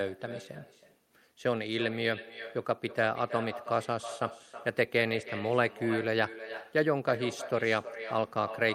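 From the very start and all the way through, this speech has echo with no canceller on it. Whoever's on the far end is playing the call through a loudspeaker, their mic picks it straight back up, and nothing strips it out before it returns. So every phrase gets trailed by its own ghost, roughly a third of a second later and about 13 dB down, sounding thinner than the direct voice.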